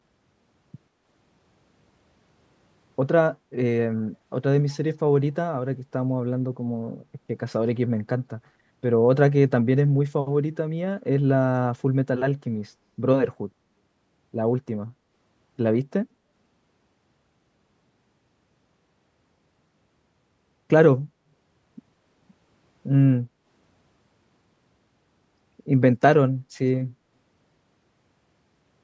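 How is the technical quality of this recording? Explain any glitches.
The recording has two brief dropouts in the room background, both from the call's echo canceller; its microphone processing keeps content below 8 kHz. Background gated by the echo canceller, at 3.38 to 3.51 s and 23.29 to 23.46 s: while the far-end loudspeaker played, the canceller cut the microphone gain to suppress echo, pulling the ambience down by about 8 dB and about 9 dB. Each dip lasts under a fifth of a second, heard as a quick hole in the room tone before it returns.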